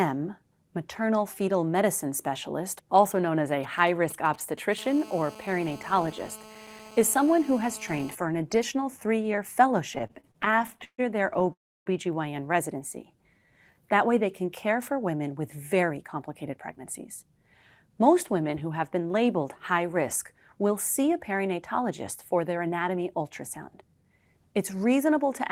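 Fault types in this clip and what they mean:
GSM signalling bursts: From about 3.63 to 4.74 s a nearby 2G phone is only handshaking, not yet on a call. The audio wiring picks up its radio pulses and rectifies them, so you get a galloping dit-dit-dit of short buzzes at 217 Hz, sitting roughly 20 dB under the speech. It's brief and choppy, with gaps between the groups rather than a continuous tone.
GSM phone buzz: Right after the signalling, from 4.78 to 8.15 s, the same phone is on a call and transmitting its bursts 217 times a second without a break. The circuit rectifies those pulses into a hard, raspy 217 Hz buzz full of harmonics, about 20 dB below the speech. It is nearly steady through the stretch and has nothing to do with what's being said underneath it.
repeated stalls (stutter): After "an additional three year", from 9.95 to 11.53 s, packets keep turning up late and the jitter buffer runs dry again and again, 25 times in that stretch. 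Each time the receiver stretches the last bit of sound to cover the wait, about 440 ms in total and up to 140 ms at once, so about 28% of the span is filler. Nothing is lost, but the speech drags and stutters.
call audio freeze: Straight after the stutter, at 11.53 to 11.88 s, the audio stops dead for about a third of a second, most of it (about 300 ms) plain silence, then resumes exactly where it left off with nothing skipped. The likely cause is packets held up in the network until the jitter buffer emptied, so the receiver filled the wait and then carried on, pushing everything after it about 329 ms later.
jitter buffer slow-down: Leading into "way they can care", from 12.77 to 13.95 s, the receiver is topping up a low jitter buffer by repeating tiny slices of the waveform, single pitch periods and bits of pauses, many times in a row. That adds about 127 ms and runs the speech at about 90% speed while the pitch stays put, so it sounds a little drawn out and lazy, with sounds held slightly long.
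jitter buffer speed-up: This happens twice, at 15.82 to 17.97 s and again after "see a perinatologist for" from 22.57 to 24.11 s. Each time the buffer is holding more audio than it wants, so the receiver trims out short bits a pitch period or so long, over and over, roughly 150 ms each time. Speech runs at about 107% and 108% speed with unchanged pitch, and it comes across as slightly hurried.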